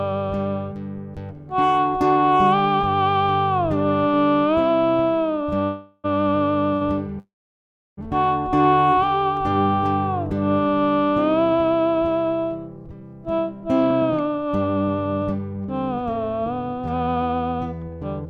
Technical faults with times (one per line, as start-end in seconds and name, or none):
5.49-5.54 short stall from a late packet
5.64-6.06 call audio freeze
6.74-6.83 short stall from a late packet
7.19-7.99 call audio freeze
8.50-8.81 jitter buffer slow-down
12.50-18.26 jitter buffer speed-up